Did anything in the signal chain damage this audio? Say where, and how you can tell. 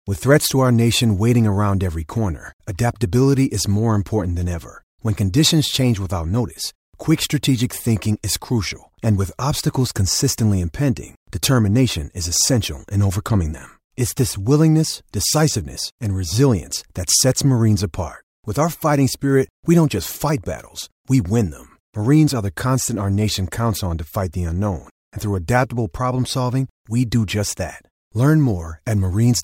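No, nothing along the chain shows up as damage here; the speech comes across intact with no sign that any stage along the way got in its way.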